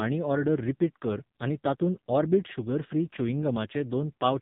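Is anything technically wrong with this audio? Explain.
Yes. Throughout the speech, AMR narrowband mobile codec damage is heavy. Nothing above 4 kHz survives. Each 20 ms frame is rebuilt from a vocal-tract model and a few pulses. The voice turns buzzy and synthetic, which fits a low mode near 5.9 kbps.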